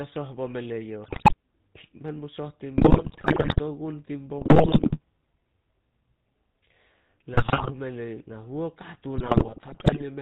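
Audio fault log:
Throughout: GSM full-rate codec, the speech sounds buzzy and gravelly because a pulse-driven vocal-tract model rebuilds it, with nothing above 4 kHz, a steady roughness unlike bursty errors.
1.04–1.34 s, 2.78–3.60 s, 4.38–4.99 s, 7.34–7.72 s, 9.18–10.03 s: GSM bit errors, brief squawks, pops and gargling where corrupted filter, pitch and gain values distort whole frames, confined to these stretches.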